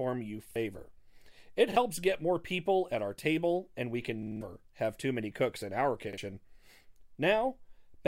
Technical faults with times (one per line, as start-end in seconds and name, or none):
0.51-0.56 repeated buffer
1.72-1.76 repeated buffer
4.23-4.41 repeated buffer
6.13-6.18 repeated buffer